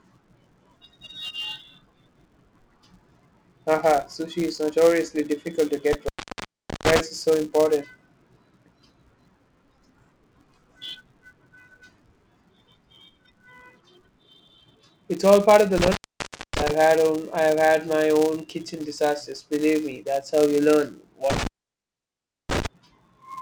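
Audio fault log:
throughout: filter restarted on every block. A steady buzz at 188 Hz runs under the speech, rising and falling with its level. The filter discards its internal state at each block boundary and starts again from silence, so every block opens with a small transient. Those repeating onsets merge into a tone at the block rate, which fits a 256-sample block at 48 kHz. The buzz is loudest on strong passages and fades in pauses.
5.93–7.00 s, 15.78–16.71 s, 21.30–22.66 s: intermittent contact. In each span the speech drops out for about 0.77 s, 0.60 s and 1.02 s respectively, with crackle as the signal breaks and again as it returns. A loose plug or cable briefly opens the connection, and while it is open only faint hiss gets through. The scratchy edges come from the contact bouncing as it opens and recloses.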